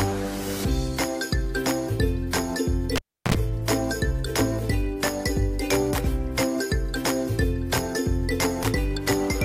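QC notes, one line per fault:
2.96 to 3.35 s, cable pulled and plugged in: a sharp pop cuts the sound to near silence for about 0.34 s, then a harsh 60 Hz mains buzz lasting roughly 64 ms breaks through before a second pop brings the sound back. A live connector was pulled out and pushed back in. The first pop is the contact breaking, the silence is the open line, and the buzz is the tip touching first and picking up hum before the full connection seats.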